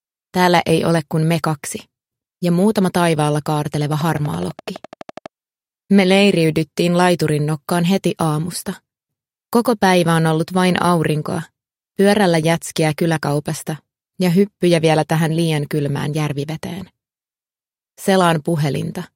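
Likely interference or a faulty connection injects a regular train of clicks from 3.93 to 5.27 s: about fifteen near-identical pops at 12 per second, roughly as loud as the sound itself.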